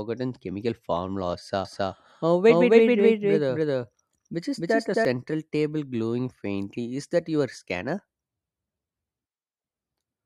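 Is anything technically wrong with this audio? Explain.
Yes. From 1.65 to 5.05 s, just before "table glowing faintly", there is a doubled audio track: a second, full-band copy of the speech trails about 300 ms behind at roughly equal level, likely from a slower parallel capture path, starting and stopping abruptly without any room decay.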